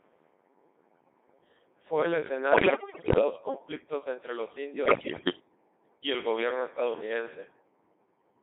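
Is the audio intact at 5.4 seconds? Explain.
No, not quite. Bit errors on digital voice radio run from 4.86 to 5.40 s, ending right at that moment. Roughly one bit in seven gets flipped, scrambling pitch and spectrum into warbly, bleepy gibberish. Underneath, the whole clip runs through the Codec 2 vocoder at 2.4 kbit/s, rebuilding speech from sine waves, so it sounds heavily robotic and buzzy in a narrow 300 Hz to 3.7 kHz band.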